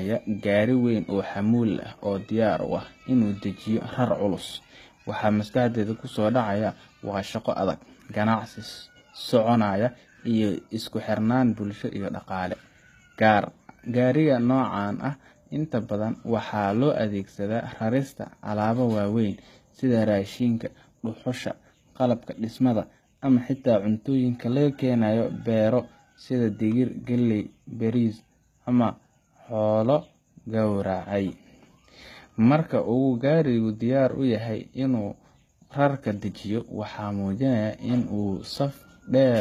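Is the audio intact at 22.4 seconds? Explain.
No. At 22.4 s, as throughout, the sound carries HE-AAC compression damage, likely from HE-AAC v2 at a low bitrate near 20 kbps. The treble is synthesized from copied lower bands, leaving s sounds gritty and metallic with nothing above 14.9 kHz.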